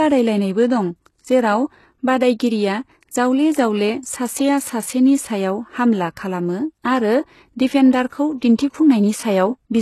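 From start to finish, the speech has a treble band that sounds bright but synthetic, with sibilants turning gritty and lispy, and nothing at all above about 12.3 kHz. This is likely HE-AAC compression: only the lower spectrum is coded properly, and the upper range is regenerated by copying lower bands upward under a coarse envelope, so harmonics there fail to line up. The plainly audible damage fits a very low rate, around 16 kbps.

At 8.57 s there is a brief pre-echo, a short hiss that arrives about 13 ms ahead of a sharp onset and blunts its attack. The transform coder spreads quantisation noise across a whole block, and when a transient lands late in that block, noise scaled to the loud part also fills the quiet stretch just before it, smearing the leading edge.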